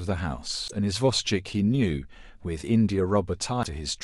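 At 0.67 s and again at 3.62 s the speech jumps ahead and a brief glitch fills about 50 ms, roughly two 26 ms frames, the likely sign of a broken MP3 bit reservoir.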